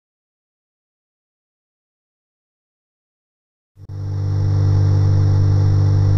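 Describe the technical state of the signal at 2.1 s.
Nothing is wrong with the signal at 2.1 s; it plays through intact there.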